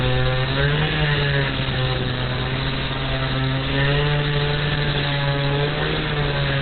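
Throughout, likely Opus compression at a very low rate, around 12 kbps, in its SILK speech mode, leaves nothing above 4.3 kHz, so everything sounds heavily muffled, narrow and hoarse.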